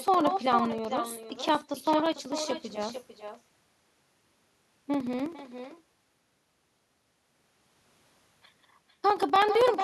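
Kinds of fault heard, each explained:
echo with no canceller: the far end's loudspeaker feeds its microphone and nothing cancels it, so the speech returns after the network round trip, roughly half a second late and about 8 dB down. Unlike room reverb, it is a distinct, thinner delayed copy, not a smeared tail.
periodic USB or driver dropouts: a blocking task stalls the audio path every 64 ms from 0.08 s to 9.75 s, cutting a few milliseconds to silence each time. Unlike random packet loss, these ticks keep a steady rhythm and are heard only under speech.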